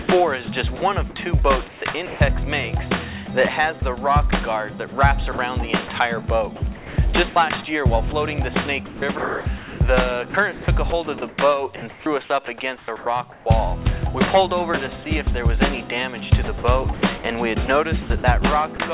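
Between 0.02 and 0.82 s, 1.68 and 2.2 s, 3.26 and 3.82 s, 4.88 and 5.38 s, 6.76 and 13.46 s, and 16.44 and 18.78 s, the sound turns choppy. This is likely sound chopped by the voice detector, which repeatedly stopped sending and left comfort noise in place, up to 1.82 s of it in the longest stretch. From 15.04 to 15.06 s a brief fragment gives way to comfort noise, likely sound dropped by the voice detector treating it as background. Throughout, nothing above 4 kHz comes through the narrowband call path.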